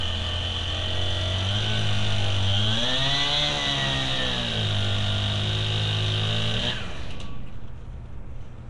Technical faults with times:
0.00-8.70 Nellymoser compression

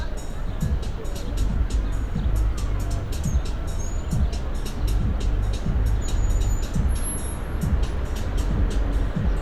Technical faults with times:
none

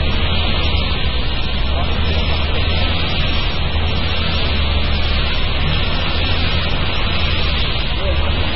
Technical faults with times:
0.00-8.56 MP3 compression

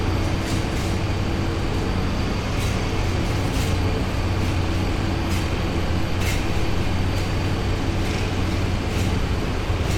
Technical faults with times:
none

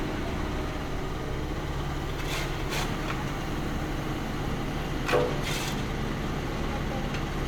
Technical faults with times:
none

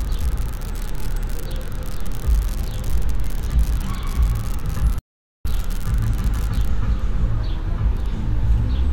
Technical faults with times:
0.00-6.71 unreliable data bit
4.99-5.45 playback stall

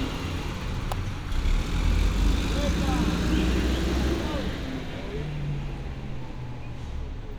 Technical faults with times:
0.92 electrical switching spike

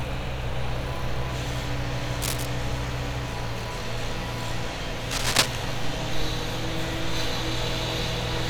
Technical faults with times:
2.21-2.46 cable scratch noise
5.11-5.55 cable scratch noise

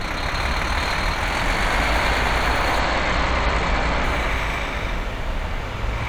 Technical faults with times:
2.80-4.04 Bluetooth SBC bit pool drop

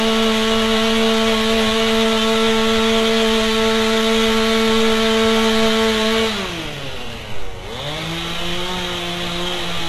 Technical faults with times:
0.00-9.88 HE-AAC compression

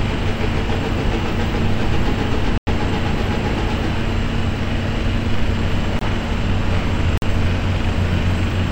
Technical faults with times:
2.58-2.67 block of digital silence
5.99-6.01 block of digital silence
7.17-7.22 block of digital silence

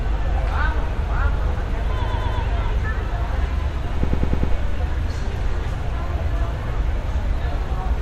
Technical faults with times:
2.05-2.41 repeated frames
4.03-4.53 repeated frames

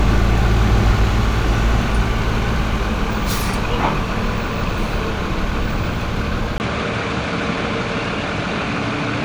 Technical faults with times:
6.58-9.25 input switched to a poorer device

